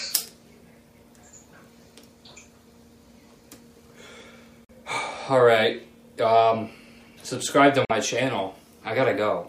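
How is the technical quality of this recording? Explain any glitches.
The recording has two short gaps where the sound cuts out, at 4.65–4.71 s and 7.85–7.91 s, likely Bluetooth dropouts: packets missed their deadline, so the output fell silent for about 60 ms, then resumed further along.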